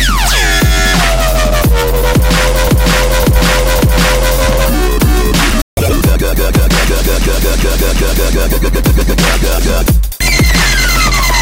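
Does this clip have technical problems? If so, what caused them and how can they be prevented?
Yes. There are three kinds of fault.

Repeated frames: a run of compressed frames was delivered more than once, so the decoder played the same stretch again. From 2.67 to 4.34 s a block of about 557 ms is heard three extra times, adding about 1.67 s. From 7.22 to 8.34 s a block of about 372 ms repeats three extra times, adding about 1.11 s. Each repeat is a stutter. To prevent it, deduplicate frames by sequence number or timestamp before decoding.

Playback stall: the player ran out of data, most likely from a late delivery or a blocked playback thread. The output cuts to silence from 5.62 to 5.77 s, about 153 ms, and the sound breaks off mid-flow before resuming. To prevent it, keep a deeper playback buffer and keep the audio thread free of blocking work.

Catch-up at higher speed: after the stall, the player resampled its backlog to win back the lost time. 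From 5.77 to 5.93 s the audio runs at 2× speed, with pitch raised by about 10 semitones, a brief squeaky rush before normal playback returns. To prevent it, absorb the gap by dropping or time-stretching audio without changing pitch.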